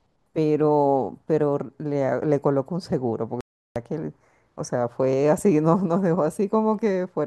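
A speech recording with a clean digital broadcast dropout in it: at 3.41 s the audio cuts to silence and stays gone until 3.76 s, so roughly a third of a second of the programme simply isn't there. That's the receiver muting after losing the signal or getting frames that failed their checksum, then picking up again once good frames arrived. A gap of about 350 ms fits something like eleven lost frames, and whatever was sent in that window is unrecoverable.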